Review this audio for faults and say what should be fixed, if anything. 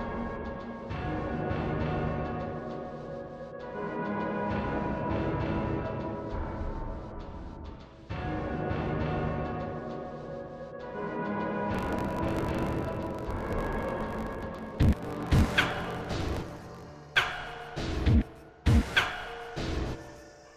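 A block size mismatch (truncated) runs from 11.73 to 16.90 s. One stage writes longer blocks than the next reads, and each block's tail is dropped. This gives a 50 Hz buzz, fitting 1024-sample writes. The sound plays 1.16 times fast at near-normal pitch. Fix it by matching the block sizes on both sides of that handoff.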